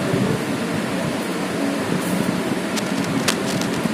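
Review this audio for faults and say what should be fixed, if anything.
From 2.67 s to 3.9 s there's cable scratch noise, a dense, ragged rustle sitting around 10 dB under the sound. It's likely a worn cable or connector being moved, its contact resistance jumping around. Swap or reseat that cable and keep it still while recording.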